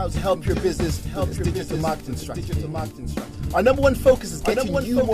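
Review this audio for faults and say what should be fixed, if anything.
A doubled audio track runs through the whole clip. A second full-band copy trails the original by about one second, only a few decibels quieter. It likely comes from the same signal being captured again through a slower path and mixed back in. Unlike a room echo, it has no decay, no room colouring and no repeating tail, just one clean copy. To prevent it, route each source to the mix only once and mute any monitoring or return path.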